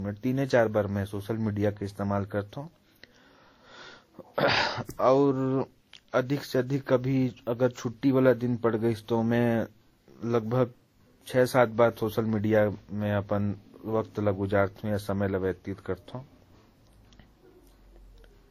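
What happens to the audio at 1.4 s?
At 1.4 s you're hearing the same thing that runs through the whole clip: the speech sounds like it has been through transcoding between lossy codecs, most likely a WMA-style encode at a modest bitrate followed by a Vorbis-style one at an even lower rate. The second encoder burns bits re-coding the first one's swirl and smearing, then adds its own, so both kinds of artefact stack up. Nothing comes through above about 16.6 kHz.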